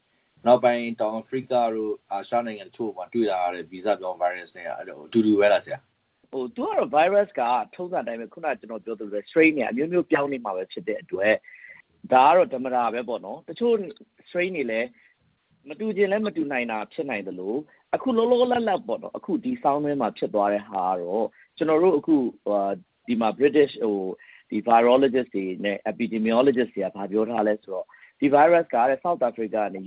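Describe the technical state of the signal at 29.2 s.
At 29.2 s the signal is intact, with no dropout, glitch or other fault, only the narrow telephone-band sound of the call path, which carries nothing above 4 kHz.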